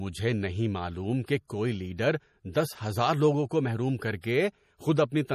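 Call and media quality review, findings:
Watery, swirly texture throughout the speech. Nothing above 14.9 kHz. Likely MP3 compression, with damage plainly audible, which fits a 40 kbps bitrate starving weak frequency lines.

Pre-echo at 4.21–4.24 s, just after "ہزار لوگوں کو محروم". 27 ms of hiss before an attack. Transform codec spread block quantisation noise ahead of the onset, softening it.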